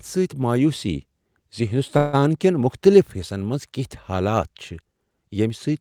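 From 1.97 to 2.21 s the speech stalls into a fading buzz before resuming at "کین مختلف حصن منز", a call audio freeze, likely from an emptied jitter buffer.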